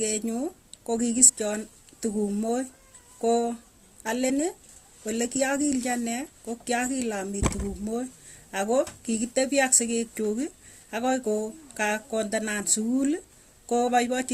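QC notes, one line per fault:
1.28–1.30 s, 4.29 s, 13.87 s: damaged data in a compressed stream. Each is a brief chirp, squawk, click or short hole cutting across the speech, no longer than about 20 ms. Corrupted bytes in the encoded stream make the decoder misread those frames and lose sync until it finds the next valid frame header.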